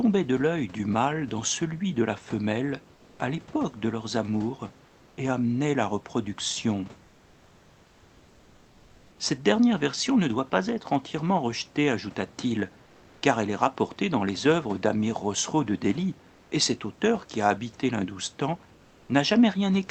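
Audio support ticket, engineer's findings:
Comfort noise in place of the background, 2.95–3.19, 4.85–5.17, 7.03–9.19, 12.85–13.21, 16.31–16.51 and 18.75–19.09 s. In the pauses the room hiss turns flat and featureless, mostly about 3–6 dB quieter. Likely Opus DTX at the sender, with the receiver synthesising the fill.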